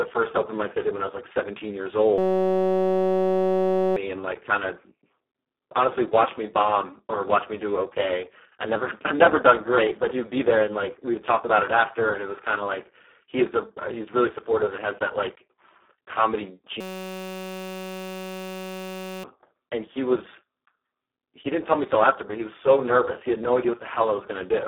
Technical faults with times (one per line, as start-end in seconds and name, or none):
0.00-24.68 Speex codec
2.18-3.96 system hang loop
16.81-19.24 system hang loop